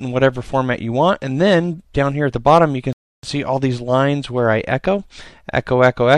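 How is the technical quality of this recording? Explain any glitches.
There is one glitch: a rebuffering stall. At 2.93 s the sound cuts to silence. It stays silent until 3.23 s, then picks up exactly where it left off. The player had run out of downloaded audio. It stopped and waited for more data to arrive. No material is skipped or repeated. The stall simply inserts a gap of about 305 ms into the timeline, so everything after it is delayed by that amount.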